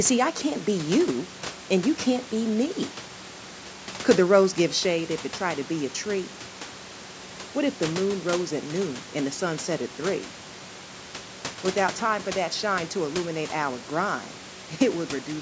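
Listening to the speech here, nothing stood out as a technical fault, with only the usual low background room noise and the call microphone processing audible.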